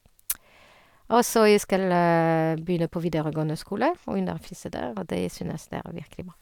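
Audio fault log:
No audible faults were found in the recording.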